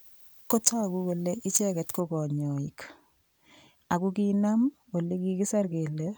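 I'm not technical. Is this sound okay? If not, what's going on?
No. For the first 2 seconds, from 0.0 to 2.0 s, the speech sounds thin, harsh and overly bright, with hissy s sounds. That's pre-emphasis left on: the treble was boosted for recording or transmission, and the matching cut that should restore normal balance never happened.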